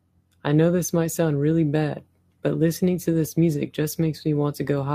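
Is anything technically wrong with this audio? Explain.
No, there's nothing technically wrong with this recording.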